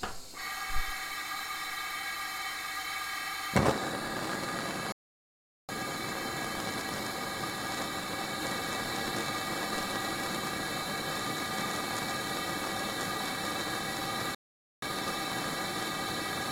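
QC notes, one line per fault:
4.92–5.69 s and 14.35–14.82 s, playback stall: the sound cuts to silence mid-flow for about 0.77 s, then again for about 0.48 s, before resuming. The gaps carry no noise or repeated material, so the output simply stopped being fed rather than the audio itself being damaged. The likely cause is the player running out of buffered data or its thread being blocked, with output held silent until it recovered.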